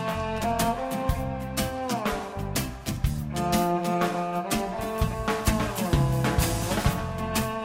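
The signal holds steady throughout, with no audible technical faults anywhere in the recording.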